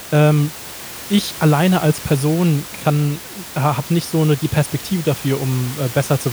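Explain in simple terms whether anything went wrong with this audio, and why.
Nothing went wrong here; the faint room noise sits well below the speech and comes from the room itself, not from any failure in the system.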